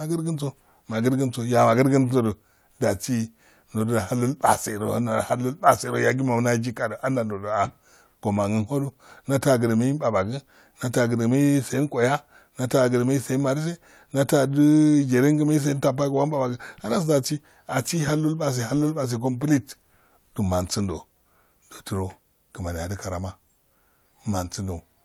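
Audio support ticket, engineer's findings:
No faults found in the speech recording. Nothing heard points to a failing component, so no action is needed on the audio side.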